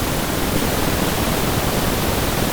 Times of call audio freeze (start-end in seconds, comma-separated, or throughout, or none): none